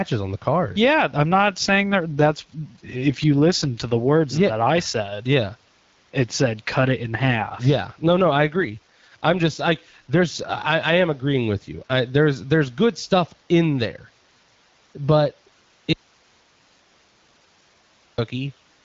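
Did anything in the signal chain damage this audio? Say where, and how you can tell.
Yes. The first fault sits at the codec and network stage: an AMR rate drop, heard twice, from 1.31 to 3.82 s and from 6.92 to 10.36 s, when the rate falls from 12.65 to 8.85 kbit/s. The speech turns rougher and more synthetic, but the bandwidth stays the same and nothing goes missing. That separates it from a bandwidth switch or packet loss. A weak radio link made the network order a lower codec mode and spend the freed bits on error protection. Outside these spans the AMR-WB coding at 12.65 kbit/s stays clear.

The second is an audio dropout to a faint residue, from 15.93 to 18.18 s, lasting about 2.25 s. The speech cuts off abruptly and only hiss remains, about 35 dB below the normal level, until the speech returns just as suddenly. A natural pause or fade would not stop this sharply. Packet-loss concealment would fill the gap with smeared or buzzy speech-like sound rather than plain hiss. 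The likely cause is that the wanted signal was lost upstream while the path after the break stayed live and passed its own noise floor.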